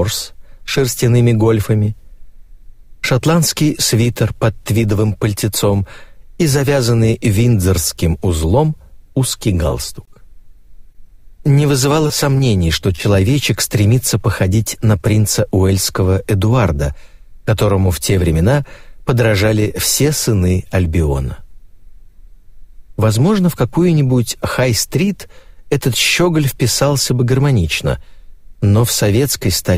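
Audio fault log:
9.69–10.55 s, repeated packet loss (robotic sound): five short gaps, none over 20 ms, each patched by stretching the last sound, so this stretch turns choppy.
10.93–10.97, 12.08–12.12, 12.38–12.42 and 12.96–13.00 s, short concealed packet loss: each time about 20 ms goes missing and gets filled from what came before, leaving a brief smear or wobble.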